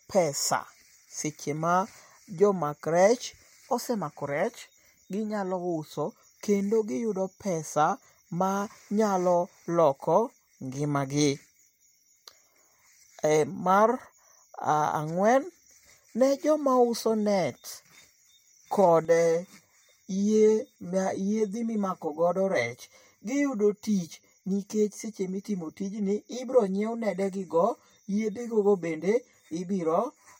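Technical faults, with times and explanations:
19.05 to 30.4 s, channel delay (comb filtering): one channel arrives roughly 10 ms late, and summing it to mono cancels shared content at evenly spaced frequencies, starting near 50 Hz and recurring about every 100 Hz, leaving the speech hollow and phasey.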